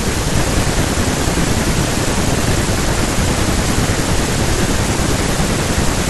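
From the start of the clip, one stage in the chain hands over blocks slightly shorter than the next stage expects, and the shortfall in each block is filled with zeros. This block size mismatch (padded) drops a tiny silent gap into every block, producing a steady buzz at about 91.5 Hz, the block rate, riding under the speech. Because each block is stretched, the speech runs at 0.996 times normal speed.

At 5.74 s, damaged data in a compressed stream corrupts a stretch of the encoded audio, so the decoder misreads the affected frame and has to find its place again at the next valid frame header. The result is a brief glitch, around 10 ms long, near the end of the clip.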